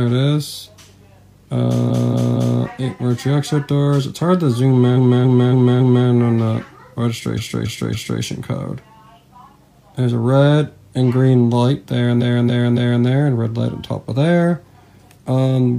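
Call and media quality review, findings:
Repeated frames, four stutters: 1.86–2.56 s (232 ms block, 3 extra plays), 4.93–6.04 s (279 ms block, 4 extra plays), 7.34–8.18 s and 12.17–13.01 s (279 ms, 3 extra plays each). Block length fits a run of five or six compressed frames rewritten or resent upstream of the decoder. Each replay is identical. Unlike loss concealment, nothing fades or drops out, and the audio grows by the replayed time, 0.7–1.1 s per event.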